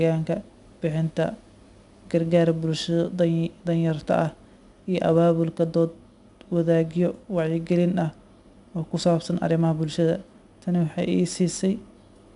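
From start to finish the speech carries 4-bit ADPCM compression. Each sample is coded as a coarse step from a prediction, leaving a gritty hiss that rises with loud passages and roughens sharp attacks. Nothing sounds above 10.6 kHz, which fits a rate near 89 kbps.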